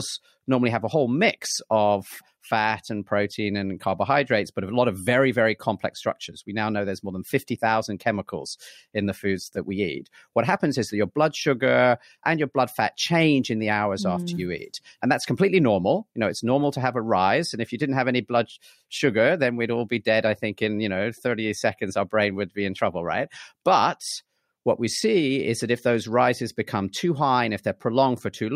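No technical faults occur at any point in this speech recording, so there is nothing to place in time order.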